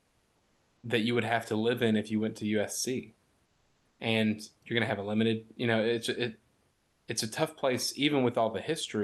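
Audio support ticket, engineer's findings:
Comfort noise in place of the background, 3.45–3.99 s and 6.71–7.07 s. Likely Opus DTX halting transmission in pauses; receiver substitutes steady, featureless noise, about 2–3 dB quieter.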